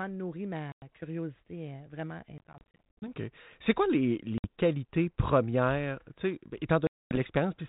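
Packet loss on an ADPCM call hits the speech four times. Holes cut in at 0.72–0.83 s (100 ms lost), 2.38–3.09 s (290 ms scattered in short gaps), 4.38–4.46 s, just before "qualités premières", and 6.87–7.18 s. Each gap is hard-edged silence. The decoder's predictor and step size drift from the sender's, so speech resumes with brief, slight distortion. The narrowband G.726 coding at 32 kbit/s adds only light damage throughout.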